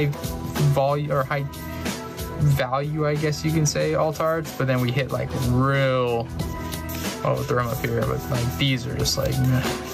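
Across the whole clip the level swings by something like 15 dB. Loud and quiet passages sit unnaturally close together and the sound feels squashed. This is gain pumping, and the likely cause is input gain set far too high for the microphone, with a fast limiter or compressor clamping down on each peak and releasing in between.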